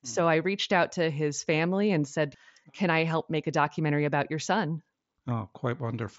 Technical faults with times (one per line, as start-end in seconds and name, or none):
none